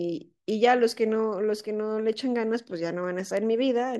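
From 0.50 s to 3.95 s there are word clock ticks, around seven sharp clicks about every half second, likely from a receiving clock drifting slightly against the sender's and slipping a sample each time.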